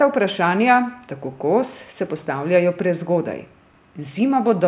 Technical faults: none

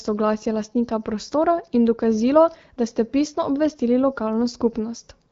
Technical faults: none

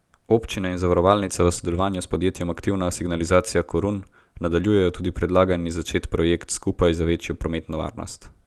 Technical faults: none

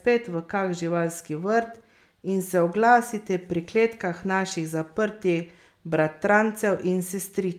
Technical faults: none

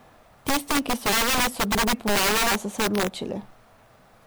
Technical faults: integer overflow; compressed frames skipped

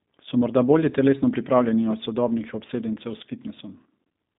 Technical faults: G.729 codec

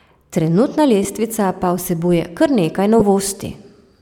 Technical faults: lost LE Audio frames

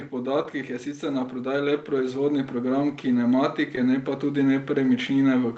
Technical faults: automatic gain rising; short concealed packet loss

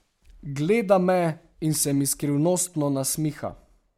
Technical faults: none

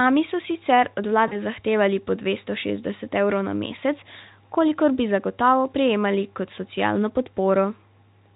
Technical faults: VoIP packet loss concealed by the speech codec

